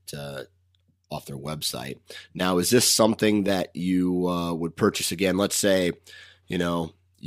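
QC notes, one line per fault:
4.88–7.27 s, block size mismatch (truncated): starting right after "that you uh would", each block loses its tail, so the sound jumps at every block boundary and carries a buzz at about 92 Hz through to the end. So little is dropped that pace and pitch stay essentially normal. On the waveform, small discontinuities repeat every ~11 ms; a spectrogram shows vertical striations at that spacing and a harmonic comb built on 92 Hz.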